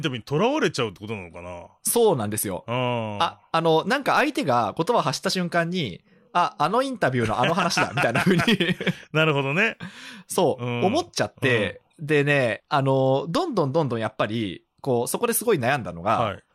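From 2.2 to 5.3 s the speech carries a 50 Hz buzz, the signature of a resampler restarted on every block. Each 20 ms block was converted independently, consistent with a 44.1 kHz to 48 kHz change, leaving an error at every block edge that follows the signal.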